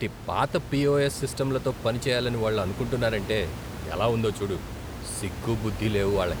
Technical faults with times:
none

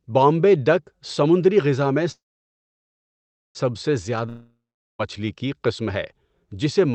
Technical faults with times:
2.11-3.57 call audio freeze
4.29-5.01 long network dropout

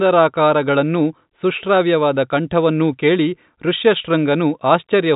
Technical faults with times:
none

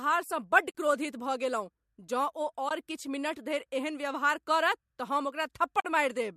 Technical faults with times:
0.70-0.73 AAC frame loss with muting
2.69-2.71 AAC frame loss with muting
5.79-5.85 AAC frame loss with muting

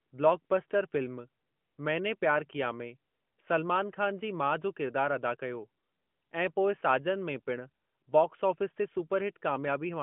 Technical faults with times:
none

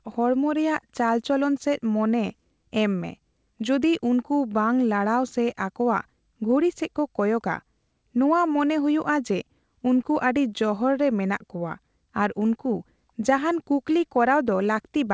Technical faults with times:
none

